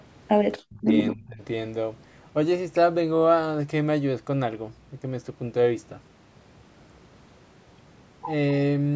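Speech clip, band-limited by call microphone processing so that nothing sits above 8 kHz, with two short dropouts in the talker's level. From 0.65 to 0.89 s the speech falls away sharply, by roughly 40 dB at its deepest, and from 1.13 to 1.41 s it dips again, by around 25 dB. This pattern is likely speech suppressed in double talk: the echo canceller treated the near talker as loudspeaker echo while both sides spoke, and attenuated it for a fifth to a third of a second each time.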